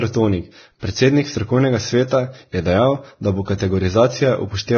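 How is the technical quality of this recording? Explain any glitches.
Quality is poor throughout. Vorbis compression, likely, across the whole clip: nothing survives above 6.5 kHz, and coarsely quantised treble turns to grainy hiss that blurs consonants, which fits a very low bitrate.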